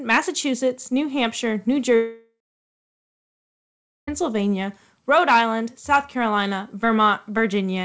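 A long network dropout runs from 1.96 to 4.09 s in this speech recording. The sound stops arriving and the receiver stretches the last fragment into a fading buzz, which gives way to about 1.7 s of silence before the speech returns, with that whole stretch of roughly 2.1 s simply gone. The likely cause is a sustained loss of packets on a call link, consistent with G.722 coding that leaves nothing above 8 kHz.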